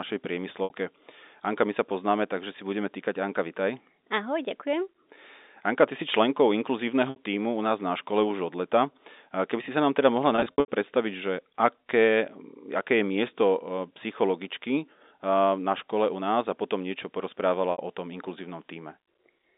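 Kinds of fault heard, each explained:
Packet loss with pitch repetition: Lost packets are bridged by repeating the last pitch period, giving brief buzzy held sounds near 0.64, 7.10 and 17.72 s, plus a scattered 0.3 s patch after "sa nám teda mohla".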